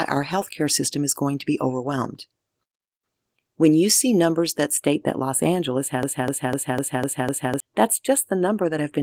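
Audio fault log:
4.77–9.03 s: channel delay (comb filtering). From just after "you see numbers that" to the end, one channel runs roughly a tenth of a millisecond behind the other, a lag of only a few samples. When the two are summed to mono, the shared content cancels at evenly spaced frequencies, the first notch sitting around 5 kHz. The result is a fixed, hollow, phasey coloration rather than any audible echo, because the offset is far too short to be heard as a repeat.
6.03–7.60 s: broken-record loop. A 0.25 s fragment repeats back to back six times, each pass identical, giving a stuttering, mechanical cycle for about a second and a half. This is likely a stall in the player or stream, which kept sending the last chunk it held in its buffer. Whatever audio should have played during that span is missing. The Opus coding at 24 kbps is light.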